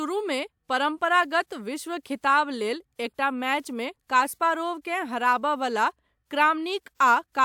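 Listening to the speech in this recording, nothing technical stood out at any point.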